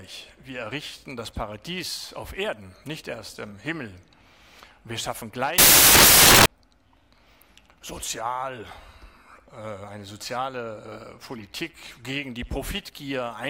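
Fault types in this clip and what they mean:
Samples built from the wrong bytes: the reader misassembles each sample's bytes, so noisy low bits dominate, bursting into loud, harsh broadband noise from 5.58 to 6.46 s.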